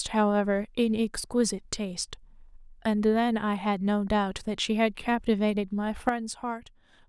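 At 6.09 s the digital gain likely stepped down from one sample to the next with no ramp, a sudden gain jump of about 8 dB. The speech and its background noise drop together and stay lower until the clip ends, with an abrupt, unsmoothed change in loudness.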